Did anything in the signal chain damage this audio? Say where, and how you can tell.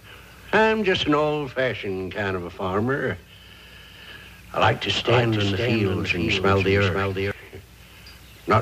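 Yes. From 4.61 s to 7.31 s there's a doubled audio track: a second full-band copy of the sound trails the original by about half a second, sitting around 5 dB quieter. It has no reverb tail or room colour, and it switches on and off abruptly at those two times. That points to the driver or buffer stage, or an edit, with the likely cause being a slower second capture path, or two out-of-step copies left in the mix.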